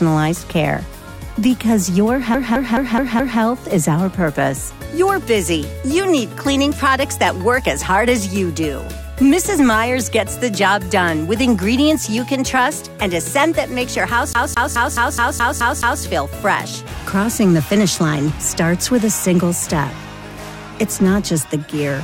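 From 2.34 to 3.41 s, the audio is caught in a CD stuck on one turn. A scratch keeps knocking the laser back a track. The same 212 ms slice repeats 5 times, with a brief mute at each jump. It recurs from 14.33 to 16.03 s, now 8 times, at the same quick, even stutter.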